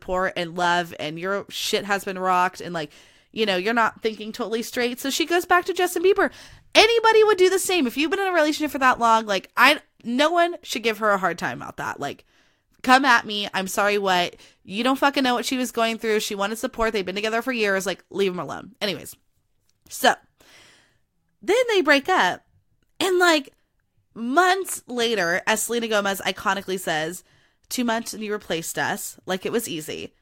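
No technical faults are audible anywhere in this recording.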